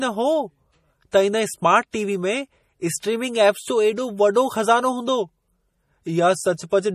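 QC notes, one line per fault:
Throughout: MP3 compression, plainly audible watery swirl; the spectrogram shows a hard ceiling at 15.1 kHz with flickering gaps, likely from a bitrate near 40 kbps.
1.11 s and 1.91–1.94 s: pre-echo, with short hiss before soft, smeared attacks as block-wide quantisation noise spreads back 17 and 24 ms; the waveform shows noise ahead of each onset.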